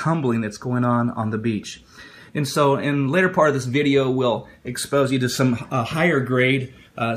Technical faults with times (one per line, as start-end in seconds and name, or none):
none